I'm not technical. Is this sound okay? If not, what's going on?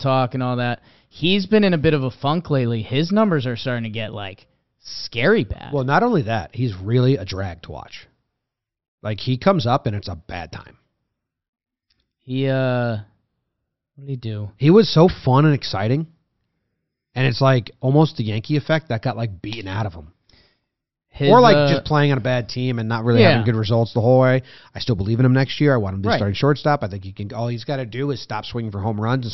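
Yes, no faults to report.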